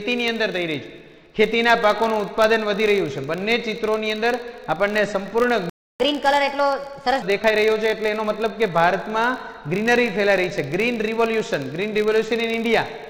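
Right from the start there's a filter restarted on every block: each block kicks off from silence with a tiny transient, so you get a 50 Hz buzz riding along the whole way, which fits 20 ms blocks, and it swells and fades with the level.

At 5.70 s the sound just stops dead for about 305 ms, until 6.0 s. That's a playback stall, likely the player running dry or its thread getting blocked.

Then from 6.0 s to 7.22 s comes catch-up at higher speed. The player rushes its backlog through a resampler at 1.25 times speed, so everything runs faster and jumps up about four semitones before settling back to normal.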